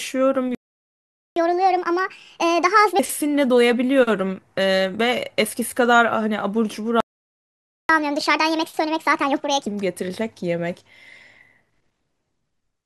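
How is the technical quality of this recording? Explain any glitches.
The recording has two playback stalls, each followed by catch-up at higher speed.

Playback stall, 0.55 to 1.36 s and 7.00 to 7.89 s: the player likely ran dry of data or was blocked, so the speech cuts to silence for about 0.8 and 0.9 s, then resumes.

Catch-up at higher speed, 1.36 to 2.99 s and 7.89 to 9.67 s: the player resamples its backlog at 1.5 times speed, making the speech hurried and raised roughly seven semitones before settling back.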